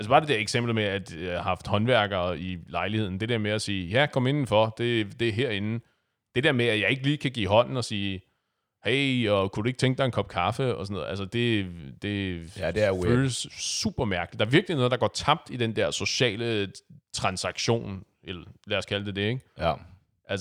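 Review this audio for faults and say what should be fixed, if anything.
Nothing in the speech recording needs fixing. With no fault present, there is no preventive step to recommend.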